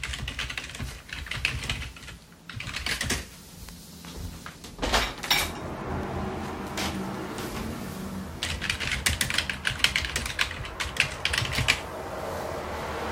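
A scratch on the disc destroyed more data than the player's error correction could rebuild on each rotation, so damaged samples were interpolated or muted. In this everyday-sound recording that produces CD scratch ticks: six brief clicks, none longer than a few milliseconds, between 5.81 and 6.91 s, repeating roughly five times a second.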